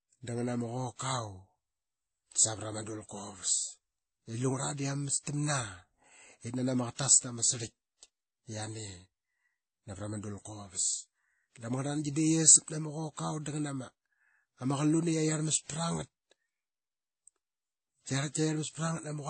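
Throughout the speech, nothing sounds above 8.4 kHz, and two or more distinct kinds of smearing and swirling overlap, which a single low-bitrate encode would not produce: likely transcoding between lossy codecs.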